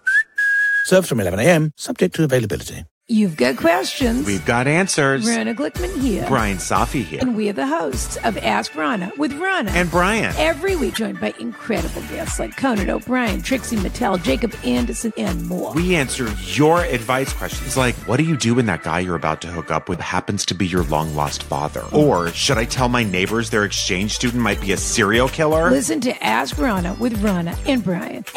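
Two short bursts of damaged data in a compressed stream break up this audio, at 7.17–7.23 s and 10.91–10.98 s, each lasting well under a tenth of a second. Corrupted bytes make the decoder misread those frames and lose sync until it finds the next valid frame header.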